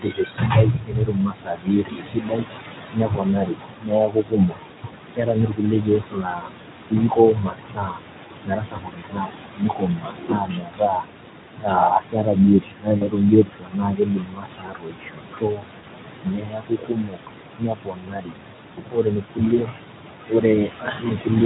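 Noise suppressor artifacts run through the whole clip. The suppressor decides, frame by frame, which bands hold steady room noise and pulls them down by about 21 dB. That background, which sits only about 9 dB below the speech, drops away in the gaps and swells back under each phrase. Unlike a simple gate, this pumping is spectral, so the colour of the residue shifts as well as its level.

Speech cut by the noise suppressor shows up repeatedly: 0.0–2.57 s, 2.83–6.72 s, 6.89–8.0 s, 8.24–9.32 s, 9.55–11.32 s, 11.56–12.38 s, 12.6–17.29 s and 17.57–21.42 s. In these stretches the suppressor mistakes parts of the speech for noise and turns them down by up to about 22 dB. Soft consonants and word endings sound swallowed or faint. The loss is in the speech itself, not just in the background between phrases, which separates it from the general pumping.

VoIP packet loss concealed by the speech codec occurs at 12.97–13.08 s and 15.79–15.85 s, with 40 ms lost each time, and at 19.55–19.61 s, with 20 ms lost. 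The decoder fills each gap by extending its last pitch and filter at falling gain. The result is a brief stretched sound, a buzzy tone or a coloured noise, that fades, and the voice stays weak for a moment after the stream resumes. That smear and its short recovery set it apart from the suppressor's quiet, muffled dips.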